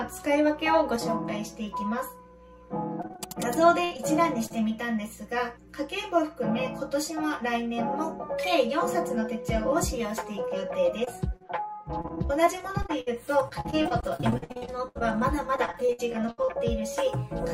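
From about 0.96 s right to the end, there's channel delay (comb filtering): one side lags the other by roughly 5 ms, and when they're folded to mono the shared content cancels at evenly spaced frequencies, starting around 100 Hz. That leaves everything sounding hollow and a bit phasey.

Between 3.01 and 3.20 s you get repeated packet loss, with four quick gaps totalling about 80 ms. Each gap is patched by stretching the last bit of sound, so that short stretch comes out choppy.

Then at 3.84 to 3.93 s there's a burst of packet loss, about 60 ms gone in one go. The receiver holds and fades the last sound across the hole, giving a brief buzz or hiss before playback picks up further on, minus the missing piece.

Right after, at 3.97 to 4.00 s and again at 4.46 to 4.53 s, come short concealed packet losses of about 20 ms and 40 ms. The gaps are filled by continuing the previous sound and blending back in, which you hear as a quick smear or wobble.

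The long one is 11.05 to 16.51 s: repeated packet loss again, now with dozens of gaps adding up to roughly a second missing, the longest about 66 ms. Over those five and a half seconds the sound turns choppy and broken up, with small pieces dropping out throughout.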